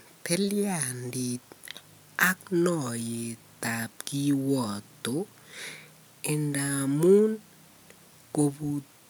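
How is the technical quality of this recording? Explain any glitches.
Listening to the recording turned up no glitches or technical problems worth pointing out.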